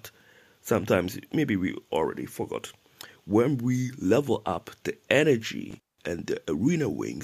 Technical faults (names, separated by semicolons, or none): intermittent contact